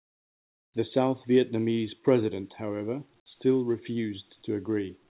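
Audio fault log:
0.00–0.74 s and 5.09–5.19 s, comfort noise in place of the background: The room sound before the speech and in the last moment is replaced by a flat, smooth hiss with no texture. It drops about 26 dB at the start and about 13 dB at the end. The real background sits about 41 dB below the loudest speech. The likely cause is discontinuous transmission in the call path. The receiver fills the gaps with synthetic noise, band-limited below 4 kHz like the rest of the call.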